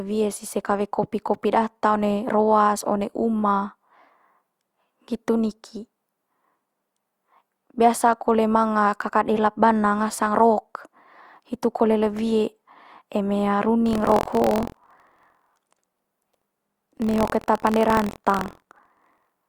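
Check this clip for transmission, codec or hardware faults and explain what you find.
One hardware fault is present: buffer tearing from 13.84 s to the end of the clip at 19.49 s. The writer filling the ring buffer and the device reading it have drifted so that their positions cross inside each period, and a small slice of every buffer, roughly 5 percent, is audio left from the previous lap, around 70 ms old, with hard joins at both edges. The result is a steady robotic buzz at 43.1 Hz riding on the speech, which fits a 1024-sample buffer.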